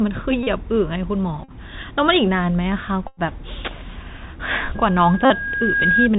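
The whole recording passes through a Bluetooth CVSD headset codec. The sound fits a 64 kbit/s stream, one bit per sample, each bit stepping the waveform up or down. Nothing above 4 kHz survives, so the speech sounds narrow and boxy. The damage is plainly audible. A granular hiss sits under everything. Sibilants turn scratchy where the adaptive step cannot keep pace.

At 0.43 s the first Bluetooth headset packet repeat occurs. Voice packets were lost, and the chip decoded the last good packet again and again. About 37.5 ms of sound is missing. Repeating a 3.75 ms packet gives a steady buzz near 267 Hz. This length fits roughly ten packets. The same buzz returns at 1.44 s for 45 ms. At 3.08 s it lasts about 97.5 ms, the longest run.

From 4.75 s to 6.09 s a loudspeaker feedback squeal appears. The microphone is picking up its own loudspeaker. At 1.6 kHz the loop gain exceeds one, so that tone feeds itself. 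It swells over about a second into a piercing whistle. It ends up a few decibels louder than the speech.

In the middle of the squeal, at 5.25 s, another packet repeat adds about 52.5 ms of 267 Hz buzz.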